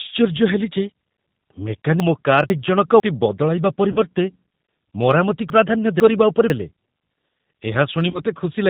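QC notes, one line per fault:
Throughout, G.729 codec: the whole clip sounds like 8 kbit/s VoIP speech rebuilt from a vocal tract filter, a pitch predictor and a handful of pulses per frame. Nothing comes through above 4 kHz, and the roughness and synthetic edge are plainly audible.
2.0 to 3.0 s and 5.5 to 6.5 s, chunks out of order: in each span two 500 ms blocks have swapped places, with the earlier one turning up one chunk late. Nothing goes missing, but the sound jumps out of sequence, with hard joins at the seams.
3.92 to 4.00 s and 8.10 to 8.21 s, VoIP packet loss concealed by the speech codec: about 40 ms of audio went missing each time, which fits two dropped 20 ms packets. The decoder stretched the last pitch and filter into a fading buzzy tone or coloured noise, and the sound stays weak and smeared for a moment after packets resume.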